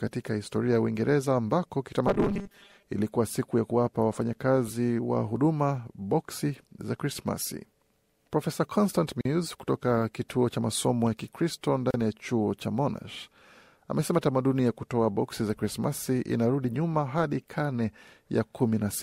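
From 2.07 to 2.84 s the speech goes robotic, a stiff metallic 200 Hz buzz riding over it, right before "ilikuwa siku ya kuwapa". That's likely repeated short buffers: roughly half the audio replayed in loops of about 5 ms instead of fresh samples.

Then there are two gaps at a join of encoded pieces: a 41 ms hole at 9.21 s just before "kutoka kituo cha masomo", and a 33 ms one at 11.91 s before "ya chuo cha". Leftover encoder delay and padding cut the flow abruptly before it picks up again.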